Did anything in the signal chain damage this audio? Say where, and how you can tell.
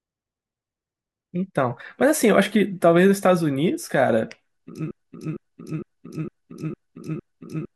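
Yes: from 4.91 s to the end, a 457 ms fragment of speech repeats exactly, back to back, like a broken-record loop. A stalled player or stream likely kept resending its last buffer, losing the real audio.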